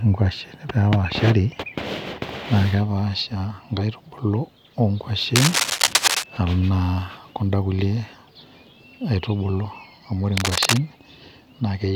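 A worn cable or connector being moved is the likely source of trouble in this speech clip, its contact resistance jumping rapidly and injecting cable scratch noise into the signal. The result is dense, uneven scratching and rustling laid over the speech, roughly as loud as the speech itself, from 5.35 to 6.24 s and again from 10.37 to 10.79 s, each burst sitting on top of the speech for under a second.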